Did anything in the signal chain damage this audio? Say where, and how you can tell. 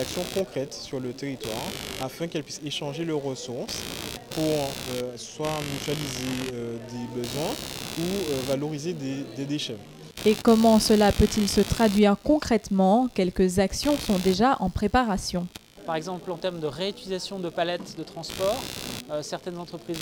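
Yes: computer activity noise runs throughout, a buzzing pulse at around 70 Hz about 15 dB below the signal. The computer's shifting load moves the shared analogue ground.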